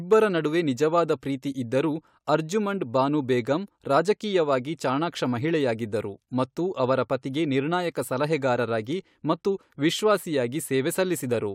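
Hard clipping at 0.12 to 0.17 s and again at 10.10 s in this speech: peaks overdriven by about 2 dB are cut flat, adding brief high-frequency crackle.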